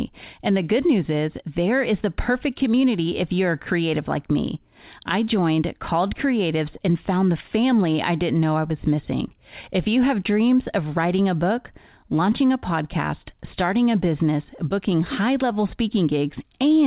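No faults to report; the speech arrives over a G.711 mu-law call path at 64 kbps, with nothing above 4 kHz, as that narrowband codec dictates.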